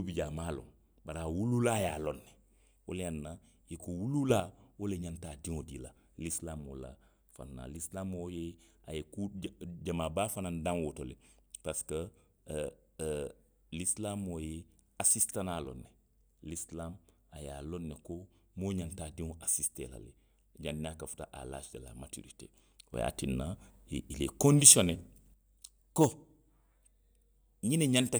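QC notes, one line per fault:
4.3–4.4 s, sudden gain jump: the speech and its background noise step up together by about 6 dB for a tenth of a second, likely a gain change applied instantly rather than ramped.
22.94–25.34 s, sudden gain jump: level and noise floor leap about 8 dB at once and hold for 2.4 s before dropping back, likely an unramped digital gain setting.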